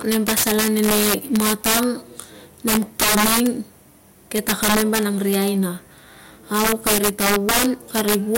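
Integer overflow runs throughout this speech: about 10 dB of overdrive wraps roughly three percent of samples to the opposite sign, giving violent cracks on loud syllables, seen as tall vertical spikes and broadband streaks.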